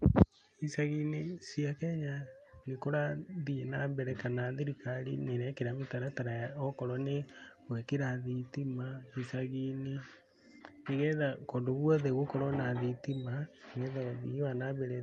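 Speech carried over a WebRTC call path with Opus coding, its top end limited at 12 kHz; no technical faults found.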